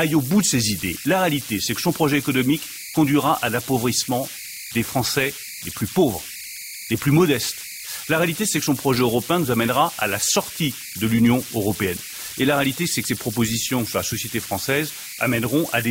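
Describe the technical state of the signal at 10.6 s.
A whistle near 2 kHz, about 12 dB below the speech, runs through the whole clip: converter idle tones from an undithered delta-sigma converter settling into repeating bit patterns.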